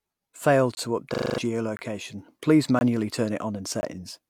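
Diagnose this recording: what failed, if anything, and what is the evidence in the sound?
Gap between chunks at the playback or storage stage: hard-edged 20 ms silences at 0.75–0.77, 1.77–1.79, 2.79–2.81 and 3.81–3.83 s, one per 1.0 s chunk, visible as blank vertical stripes.

System hang loop at the driver or buffer stage: from 1.14 to 1.38 s a 40 ms slice repeats six times, buzzing at 25 Hz. On the waveform it shows as identical repeated blocks, and about a fifth of a second of sound is lost.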